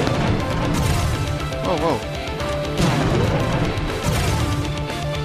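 No technical faults can be heard anywhere in this audio.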